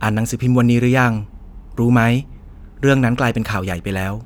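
No technical faults occur anywhere in the speech, so there is nothing to describe in time order.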